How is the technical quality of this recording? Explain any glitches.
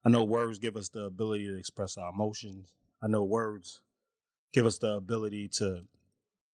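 The speech recording holds steady throughout, with no glitches, dropouts or other technical faults to be heard anywhere in the signal.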